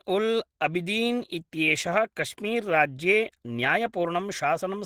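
This speech clip carries Opus compression from start to finish, plainly audible: the voice sounds muffled and hoarse, with grainy, noisy texture where the detail should be. That points to a low bitrate around 16 kbps, likely with the encoder running its hybrid speech mode.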